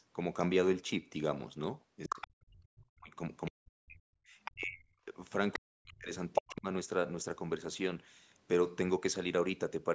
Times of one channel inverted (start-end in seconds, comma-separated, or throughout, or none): none